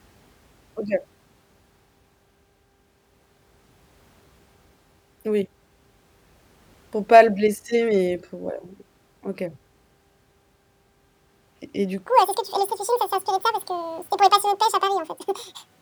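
From 12.07 s, right after "et du", to the end at 15.81 s, the speech plays in a section at the wrong speed: 1.88 times too fast, roughly ten semitones higher, likely played against the wrong clock. Unlike a pitch shift, tempo and pitch jump together.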